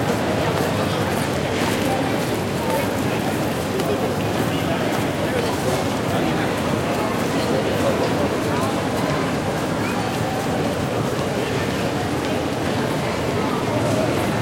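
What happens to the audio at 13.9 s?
Nothing goes wrong at 13.9 s; the audio plays through that moment intact, with no dropout, click or distortion.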